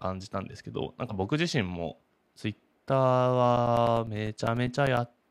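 From about 3.57 s to 5.17 s the speech picks up periodic USB or driver dropouts: something stalls the audio path every 0.1 s, punching a few-millisecond hole of silence each time. You get roughly fifteen evenly spaced ticks riding on the speech.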